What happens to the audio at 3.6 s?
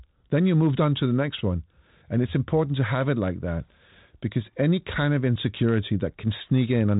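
Nothing goes wrong at 3.6 s; the speech runs through that moment intact, carried by the 32 kbit/s G.726 ADPCM telephone channel.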